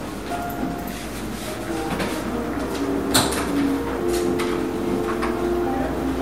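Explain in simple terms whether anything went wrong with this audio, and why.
Nothing went wrong with this audio; there is no fault to explain.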